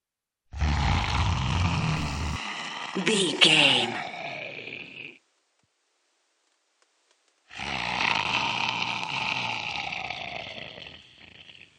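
From 2.36 s to the end, the sound abruptly loses everything above 9.9 kHz and takes on a different noise floor, faint, roughly 45 dB down, with no gap and no level jump, so the likely cause is the input switched to a poorer device, not a simple filter.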